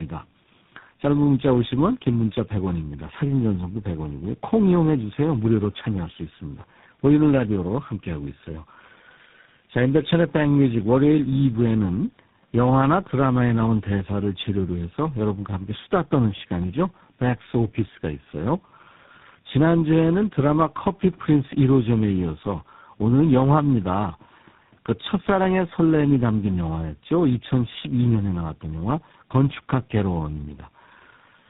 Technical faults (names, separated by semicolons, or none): tandem speech coding